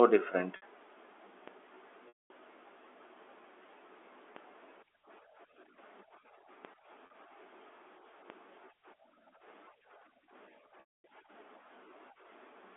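A telephone-band speech recording, narrowed to roughly 300 Hz–3.5 kHz by its G.711 A-law line, carries two faults. At 0.56 s (60 ms) and 7.06 s (40 ms) the sound briefly freezes into a held, buzzy tone, and at 2.08 s (220 ms) and 10.8 s (240 ms) it fades to silence before cross-fading back. This is packet loss with pitch repetition: the receiver looped the last pitch period to fill each gap. Low thumps at 1.48, 4.36, 6.65 and 8.3 s are DC steps, where the waveform's zero line jumps abruptly and then drains away through a 20 Hz high-pass.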